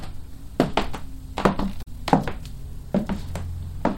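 At 1.79 to 1.88 s, damaged data in the compressed stream produces a brief garbled disruption lasting about 90 ms. The decoder misreads corrupted frames and loses sync until it finds a valid header. On a spectrogram this shows as an abrupt break; the waveform shows a short, jagged discontinuity.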